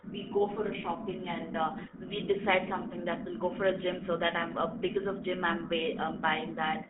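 Throughout, the speech sounds buzzy and gravelly within a 200 Hz to 3.4 kHz band: the GSM full-rate codec rebuilds it from sparse, regularly spaced pulses.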